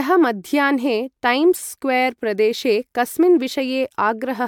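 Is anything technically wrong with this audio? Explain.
Yes. Throughout the speech there is generation loss: a swirly, hollow smear with softened consonant attacks, likely from about five successive MP3 encodes near 140 kbit/s. Each pass quantises on a shifted frame grid, so the damage piles up beyond what one encode at that rate would produce.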